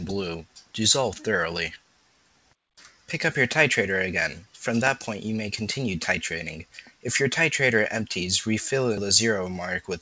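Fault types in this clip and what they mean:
Noise suppressor applied to music or sounds: a speech-tuned suppressor stayed on and keeps reading sustained material as noise, so held parts and tails get pulled down while attacks slip through. The level swings by roughly 5 dB throughout, giving a pumping, thinned-out feel.
Sound cut by the noise suppressor: specific stretches got pushed down harder than everything around them. You hear dips from 0.46 to 0.74 s, 1.78 to 2.54 s, 2.90 to 3.09 s and 6.65 to 7.04 s, dropping about 12 dB at worst (about 9 dB in the third).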